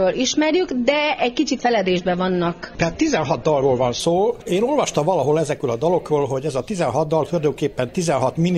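From 0 to 4.0 s, an adaptive stream starting at a low bitrate: nothing above 6.9 kHz and stronger codec artefacts, consistent with roughly 24 kbit/s, then a gapless step up.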